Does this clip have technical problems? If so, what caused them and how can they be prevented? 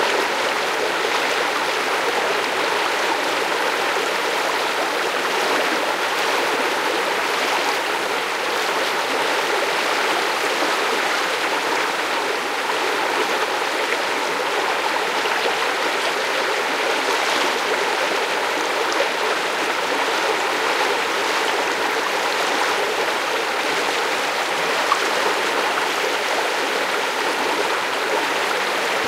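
No, nothing goes wrong technically in this recording of sounds, so there's no cause to track down and nothing to prevent.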